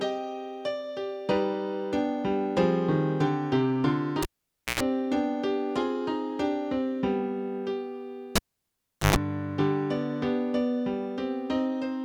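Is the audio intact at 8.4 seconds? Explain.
No, 8.4 seconds falls right inside a cable pulled and plugged in, running from about 8.36 to 9.16 s. The connector gets yanked while the signal's live, so you hear a pop, then roughly 0.76 s of near silence with nothing reaching the input. As the plug goes back, only the tip touches at first, which lets in a 120 ms burst of 50 Hz mains buzz, and a second pop lands as the sound returns.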